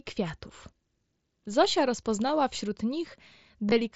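Packets from the headset were lost and concealed, the receiver filling each gap by repeating the best-matching recent waveform. At 2.28 s a single 7.5 ms loss is nearly hidden; from 3.69 to 3.72 s a 22.5 ms run, fitting about three lost packets, gives a brief buzzy held tone and a slight warble as real audio resumes.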